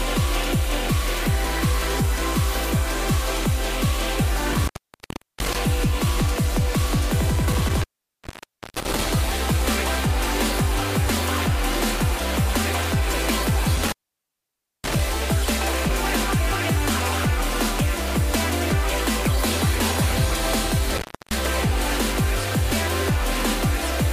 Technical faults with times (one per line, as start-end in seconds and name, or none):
4.52-5.56 intermittent contact
7.53-9.08 intermittent contact
13.76-15.00 intermittent contact
20.98-21.33 intermittent contact